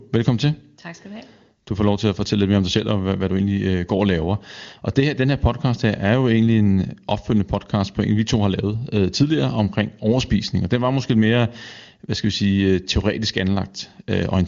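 No technical faults occur at any point in the speech, which passes through an AMR wideband (HD Voice) codec path at 23.85 kbit/s with nothing above 7.2 kHz.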